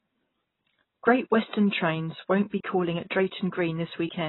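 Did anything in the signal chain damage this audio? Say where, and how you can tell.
Yes, at the codec stage, and it runs the whole clip. The speech is dull, with nothing above about 3.9 kHz, and the sibilants have a smeared, warbly fizz. That's likely AAC compression at a very low bitrate, around 16 kbps, heavily band-limiting and starving the spectrum.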